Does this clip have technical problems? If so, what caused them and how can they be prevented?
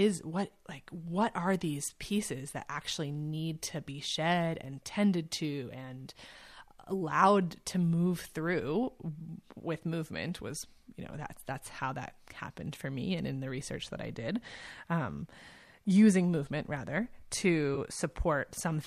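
Yes. AAC frame loss with concealment occurs between 17.75 and 17.78 s, near the end of the speech. About 20 ms of coded audio never reached the decoder, which fits two dropped frames. The decoder bridged the gap by reusing the spectrum from the last good frame. Because the gap is so short, the result is a brief smeared, noisy patch rather than a dropout to silence. The light roughness of the low-delay AAC compression underneath is likely AAC-ELD at about 64 kbps. Sending redundant or forward-error-corrected frames over a steadier network link would prevent such gaps.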